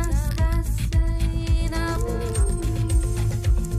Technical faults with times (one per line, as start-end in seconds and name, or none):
1.95 damaged data in a compressed stream